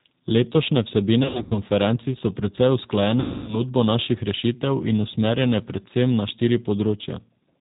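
The whole recording passes through the G.729 codec (G.729A at 8 kbit/s), which discards the original waveform and resynthesises speech from a vocal tract filter, a pitch estimate and a handful of pulses per frame. The damage is plainly audible: nothing above 4 kHz survives, so the speech sounds muffled and narrow, with a rough, slightly synthetic grain.

From 1.23 to 1.57 s, VoIP packet loss concealed by the speech codec sets in. Packets go missing in scattered bursts totalling about 200 ms across a 280 ms stretch, the longest gap 80 ms, which fits around ten 20 ms packets. The decoder fills each hole by repeating its last pitch and filter at falling gain, so the speech smears into brief buzzy tones or coloured noise that fade. The second loss, from 3.20 to 3.64 s, drops about 280 ms of audio, pointing to some fourteen packets. The sound stretches into a decaying buzzy tone or coloured noise and stays weak and distorted as the decoder recovers into "naših rešitev in usmerjene".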